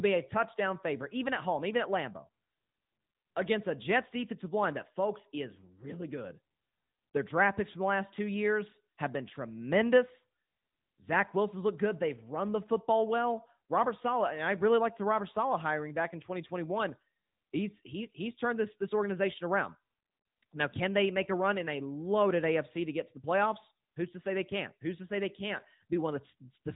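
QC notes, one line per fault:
Throughout, AMR narrowband mobile codec: speech stops at 3.8 kHz, and frame-by-frame vocal-tract modelling leaves it buzzy and synthetic, fitting a mode around 10.2 kbps.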